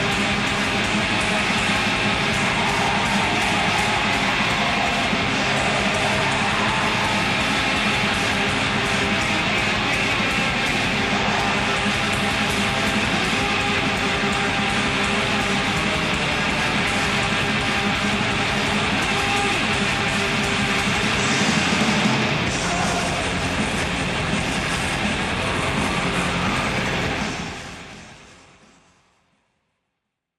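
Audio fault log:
No fault to log; the sound simply fades out smoothly over the last few seconds.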